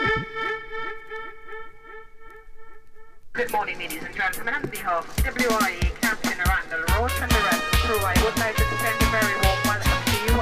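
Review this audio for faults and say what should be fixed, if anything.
Nothing should be fixed, as reviewing this audio turns up no faults.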